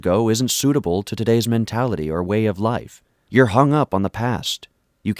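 Nothing stood out as a technical fault on listening to this speech recording.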